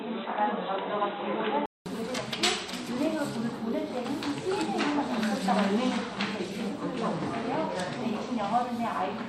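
From the start to 1.86 s the sound is dull and boxy, with nothing above 3.9 kHz and a faint new noise floor about 35 dB down. A 200 ms silence follows before it clears at the same level, likely an input switched to a poorer device.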